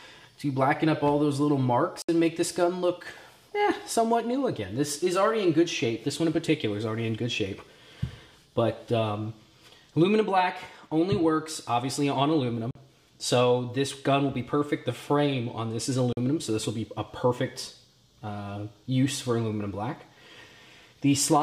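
The audio cuts to silence at 2.02 s for about 64 ms, then at 12.71 and 16.13 s for about 43 ms each: likely Bluetooth dropouts, seen as blank gaps in the waveform and spectrogram.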